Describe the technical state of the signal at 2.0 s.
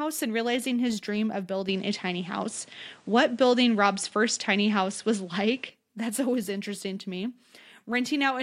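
An input switch to a poorer device runs from 1.69 to 5.70 s, likely a lower-grade microphone: nothing above 10.5 kHz, a faint new noise floor, and a modest level shift.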